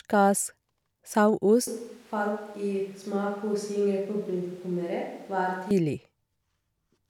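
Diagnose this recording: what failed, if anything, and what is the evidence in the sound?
From 1.67 s to 5.71 s the speech turns abruptly roomy and hollow, loses bass, drops by about 5 dB, and sits over room noise roughly 30 dB below it. This points to a switch to a distant microphone at the analogue capture stage, most likely a failed or dropped close mic. Its pickup favours reflections over direct sound. A spectrogram shows thinner low end, smeared reverberant tails and a raised noise floor, with hard step changes in the waveform envelope at both boundaries.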